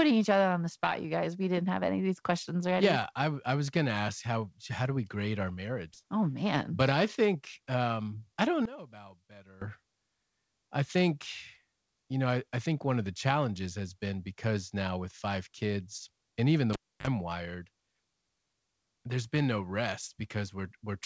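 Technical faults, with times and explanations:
5.94–5.96 s, skip ahead: Right after "do we grade our", the receiver threw away a stretch of already-queued audio, roughly 0.7 s, instead of playing it late. Nothing was inserted in its place, so the speech on either side is butted together almost seamlessly. The listener hears the sentence lurch forward as if part of it had been cut out with scissors, with no pause or fill marking the join.
6.03–8.35 s, jitter buffer speed-up: The jitter buffer was holding more audio than its target, so it repeatedly cut out small pitch-period-sized slices to drain the excess, about a fifth of a second in total. Speech runs at roughly 109% of normal rate while the pitch stays the same, giving a rushed, slightly clipped delivery that settles back to normal pace just before "I don't". The speech carries the dull, band-limited sound of a wideband call codec, with nothing above 8 kHz.
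8.65–9.62 s, one channel inverted: For just under a second, the sound drops by about 19 dB and turns faint. The centred speech has largely cancelled itself out, leaving only a weak residue of what differs between the two sides. This is most likely one stereo channel flipping polarity before the pair was summed to mono, so that the shared content subtracted out instead of adding up.
16.73–17.07 s, cable pulled and plugged in: After "five kids and even", a live connection was yanked out and reinserted. There is a pop, then about 0.29 s of near silence with the line disconnected. As the plug goes back in, its tip briefly touches before the contact seats, letting through about 45 ms of 50 Hz mains buzz. A second pop follows as the signal snaps back.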